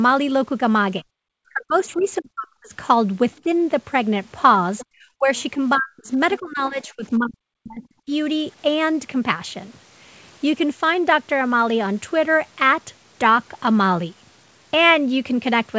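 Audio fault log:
1.01–2.72 s, speech suppressed in double talk: this is likely an echo canceller that could not tell the near talker from loudspeaker echo while both sides spoke, so it pulled everything down together. The talker's speech sinks by as much as about 40 dB at the deepest point, with roughly a second of the span dipped or cut out in pieces, leaving it thin and broken.
1.87–2.06 s, other side's voice leaking through: the far end played over the talker's loudspeaker was likely not fully cancelled at the microphone, so a faint scrap of that second voice sits under the speech, about 30 dB below it.
3.44–3.48 s, speech suppressed in double talk: a brief duck of about 5 dB over some 40 ms, a small dip in level.
4.78–4.86 s, other side's voice leaking through: a short fragment of the far voice comes through, louder this time at about 20 dB below the speech.
4.92–8.12 s, speech suppressed in double talk: the longest stretch, with around two seconds of the talker pushed down, again by as much as about 40 dB, so the speech fades, dulls and drops out in pieces.
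5.37–5.42 s, other side's voice leaking through: another tiny scrap of the far voice, about 30 dB down, inside the suppressed stretch.
The wideband call path underneath, with nothing above 8 kHz, carries the speech cleanly apart from these events.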